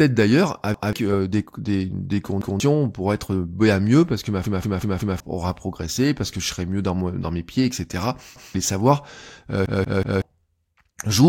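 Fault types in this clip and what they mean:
Repeated buffer: late audio made the device replay its last block, so the speech stutters as 186 ms chunks repeat up to four extra times.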